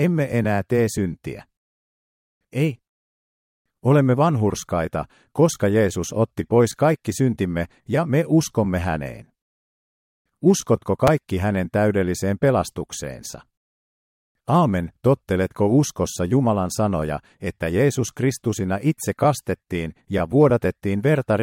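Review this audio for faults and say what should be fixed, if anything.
Chunks out of order at 11.07 s: one short block of audio, about 5.33 ms long, was delivered one block late and played after its successor. Nothing is lost, but the three hard joins produce a brief jumbled moment just before "hänen täydelliseen pelastukseensa". To prevent it, reorder buffered blocks by sequence number or timestamp before playback or writing, rather than emitting them in arrival order.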